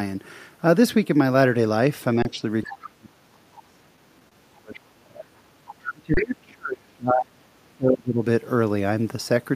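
At 2.22 to 2.25 s, an underrun with held sample occurs. The output buffer ran dry, and the waveform freezes flat for 27 ms. About 30 ms of live audio was lost.

From 2.63 to 2.73 s, a faint second voice, about 20 dB below the speech, comes through. This is likely the other side's voice leaking through past the echo canceller.

From 2.75 to 5.38 s, the speech dips and breaks up, sometimes very deeply. This is likely speech suppressed in double talk, with the canceller turning down this side's voice along with the echo while both sides talk.

At 4.29 to 4.32 s, a short stall from a late packet holds one sound for 27 ms. Playback then resumes where it stopped, with nothing missing.

From 5.89 to 8.22 s, the speech is ducked and chopped again. This is likely the same double-talk suppression.

At 6.14 to 6.17 s, a second underrun with held sample flattens the audio for 30 ms. Roughly 30 ms was lost.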